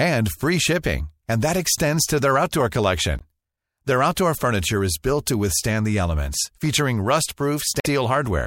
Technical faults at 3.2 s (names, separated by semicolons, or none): damaged data in a compressed stream